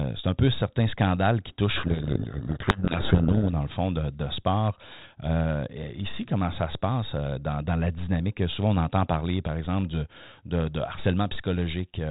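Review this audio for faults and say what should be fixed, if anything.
A codec payload misread runs from 1.76 to 3.51 s, between "peu certains scandales qui" and "dans le fond de". Harsh distortion buries the speech there. The decoder reads the G.726 code words in reversed bit order. Configure both ends to use the same G.726 bit packing.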